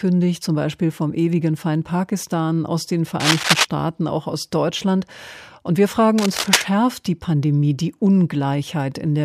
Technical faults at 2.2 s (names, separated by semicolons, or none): none